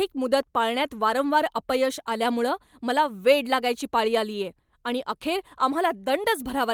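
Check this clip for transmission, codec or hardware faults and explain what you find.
Nothing in this speech recording points to a fault. Careful listening across the whole of it turns up nothing to report.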